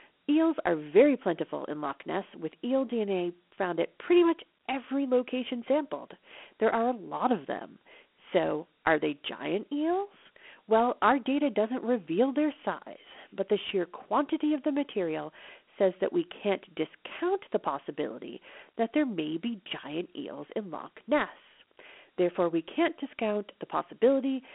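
From start to finish the speech is confined to a narrow band, about 250 Hz to 3.4 kHz with nothing above 3.9 kHz, and carries a plainly audible gritty hiss. This is Dialogic VOX ADPCM: coarse 4-bit steps, fitting 32 kbps.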